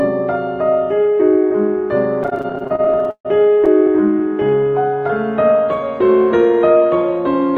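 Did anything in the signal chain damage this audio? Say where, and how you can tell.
Yes. Between 2.23 and 3.68 s the network stage delivered packets late or too slowly to keep up with playback. The jitter buffer of the call path ran dry in a rapid string of repeated stalls (stutter), about two dozen short gaps, the longest near 141 ms. Each time the receiver stretched the last bit of music to fill in, fading it during the longer waits. That adds roughly 450 ms of filler, about a third of that stretch, so the music drags and hiccups rather than losing any content.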